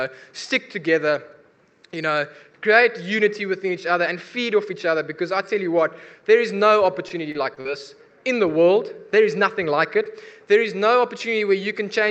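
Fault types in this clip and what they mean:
Repeated packet loss (robotic sound): Between about 6.96 and 7.70 s the stream keeps dropping or delaying packets, so the receiver has to patch one hole after another by stretching the last bit of sound it got. You hear roughly six short gaps, the longest around 43 ms, with about 118 ms of patched-over audio in that stretch. It comes out choppy, with small pieces missing, against the call path's roughly 8 kHz band limit.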